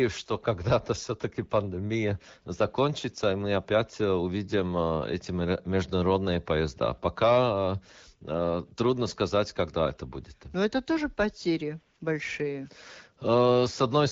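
No technical faults are audible in this speech; it has the band-limited character of AMR wideband (HD Voice) coding, with only light traces that fit a rate of about 12.65 kbit/s.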